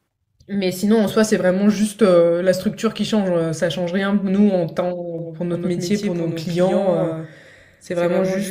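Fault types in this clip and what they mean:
Doubled audio track: From about 5.18 s to the end, the speech acquires a hard, slapback-like second copy trailing roughly 150 ms behind, only about 5 dB quieter. The copy is full-band, has no decay or room colour, and cuts in abruptly rather than building up. The likely cause is the same signal reaching the mix twice, either captured again through a slower path or held as two misaligned copies in an edit.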